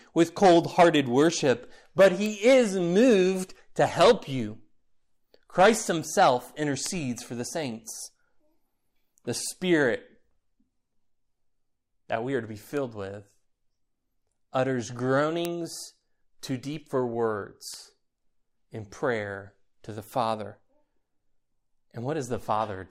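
A speech clip with four bit error spikes, sharp isolated ticks at 6.86, 12.77, 15.45 and 17.74 s, peaking around -11, -23, -5 and -23 dBFS. Each is a flipped bit jolting a sample or a few by a power of two, then snapping back.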